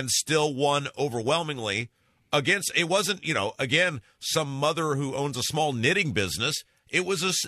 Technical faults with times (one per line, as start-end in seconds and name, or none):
none